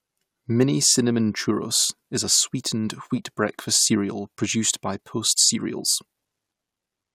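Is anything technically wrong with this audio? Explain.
No, nothing is technically wrong with this audio.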